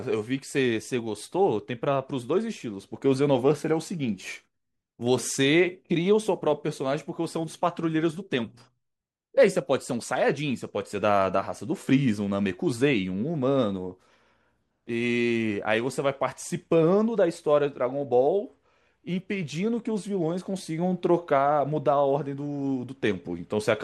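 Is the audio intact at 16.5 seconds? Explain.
Yes, at 16.5 seconds the speech runs on intact, with no dropout, click or distortion at that moment.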